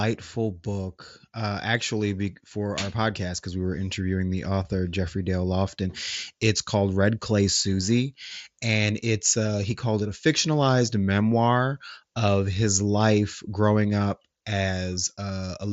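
No technical faults can be heard in this speech recording.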